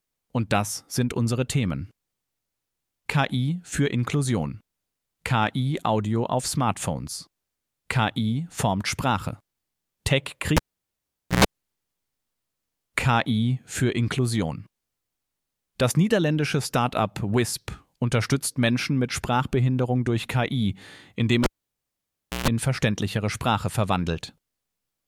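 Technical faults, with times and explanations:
10.57–11.45 s and 21.44–22.48 s: cable pulled and plugged in. Each event opens with a pop as the live connector breaks contact. The signal then drops to near silence for 0.83 s and then 0.99 s. As the plug goes back in, a short burst of 60 Hz mains buzz lasts about 0.11 s and then 0.14 s. During that burst only the tip touches and the ground sleeve hasn't yet connected, leaving the input open to hum. A second pop marks full reconnection.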